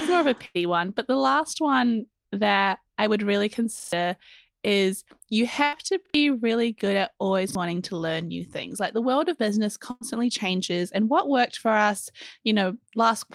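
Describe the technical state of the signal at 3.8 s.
Right after "that I would really" there's a repeated buffer, running from about 3.80 to 3.93 s. Fresh audio didn't reach the device in time, so it replayed the last chunk, roughly 43 ms long (which fits a 2048-sample buffer), three extra times. You hear a short stutter, the same slice of speech looping with a hard seam at each repeat. Something like 150 ms of the real audio goes missing there.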